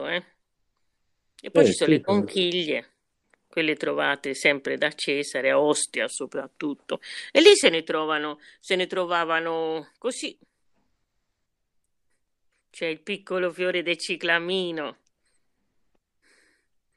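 No technical faults can be heard anywhere in the recording.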